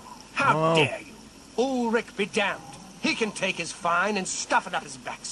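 No technical faults are audible.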